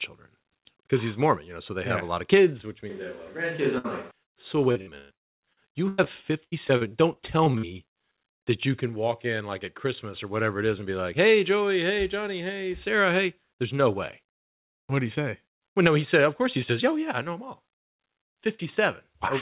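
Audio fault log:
2.9–4.11 s, switch to a distant microphone: just after "lot of kids which" the sound turns roomy and hollow, with thinner bass and a background noise floor about 30 dB below the speech, but no real change in level. The likely cause is the close microphone dropping out in favour of a far one. On a spectrogram the low end thins and diffuse noise fills the gaps between syllables.
3.78–3.86 s, burst of packet loss: about 60 ms of audio never arrived. The receiver stretched the last sound into a short fading tail, then jumped ahead past the missing piece. The waveform shows a smooth decaying stretch, and the spectrogram shows a smeared, frozen stretch before a hard restart.
4.24–4.28 s, short concealed packet loss: roughly 20 ms went missing and was patched by continuing the preceding sound and cross-fading back. It is heard as a tiny smear or wobble. On the spectrogram it appears as a brief blurred sliver, with no visible gap in the waveform.
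4.72–6.08 s and 6.44–7.74 s, repeated packet loss (robotic sound): the first run has ten dropouts, the longest 118 ms, with about 38% of the span filled in. The second has nine, the longest 78 ms, with about 24% filled. Each hole is patched from the last sound, so the speech turns choppy with pieces missing. The spectrogram shows repeated frozen, buzzy blocks interrupting normal harmonics, all within the narrow G.711 band that holds nothing above 4 kHz.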